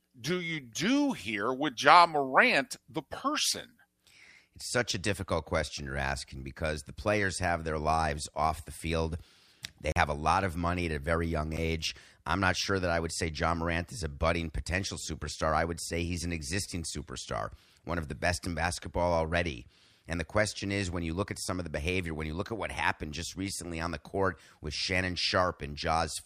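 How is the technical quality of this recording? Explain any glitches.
Two glitches in the speech, both a block of digital silence. At 9.92 to 9.96 s the audio cuts out for 40 ms, likely because the output buffer wasn't filled in time, giving a short hole. At 11.57 s an 8.7 ms dropout is too brief to hear as a gap and comes across as a single tick.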